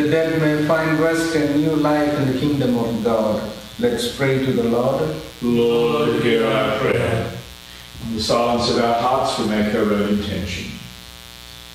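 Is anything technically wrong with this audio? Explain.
Yes, there are two problems: a buzz running through the whole clip and a single short glitch partway through.

Mains buzz is present from start to finish, sitting roughly 20 dB below the sound. A dimmer, rectifier or poorly shielded cable lets sharp switching spikes into the signal twice per 60 Hz cycle, producing a dense stack of harmonics reaching into the kilohertz range. That gives a steady, raspy edge rather than the smooth, low tone of plain mains hum, which would be little more than a clean 60 Hz or 120 Hz sine.

At 6.91 to 6.94 s there is a brief garbled glitch where the audio skips forward, most likely from a broken MP3 bit reservoir. MP3 frames borrow spare bytes from earlier frames; when frames go missing, the next one reaches back and decodes another frame's bytes. The 30 ms disturbance, about one frame of roughly 26 ms, is where the audio jumps ahead and the frames just after the cut come out as a chirp, a burst of noise or a short hole.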